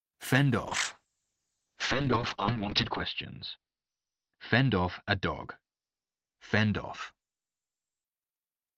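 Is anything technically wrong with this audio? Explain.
Yes. A call bitrate drop runs from 0.68 s to 8.10 s. A falling bandwidth estimate forced the encoder from 40 kbps down to 6 kbps, where it stayed at its lowest for 2.32 s. It coded more coarsely and narrowed the audio band from 20 kHz to 6 kHz. The speech sounds muffled and rough. A spectrogram shows everything above 6 kHz abruptly cut off, with smeared, blocky detail below.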